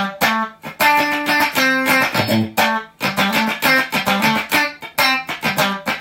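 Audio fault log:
Nothing to log here: the audio runs along with no faults anywhere.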